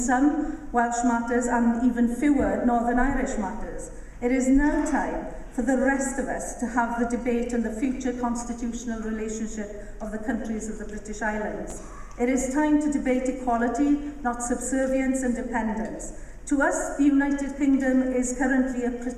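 A pair of audio chunks was delivered out of order between 11.70 and 11.73 s: one chunk of about 11.6 ms arrived a single chunk late and played after its successor. Nothing is missing, but the swapped pieces create three hard joins, heard as a brief jumbled flicker.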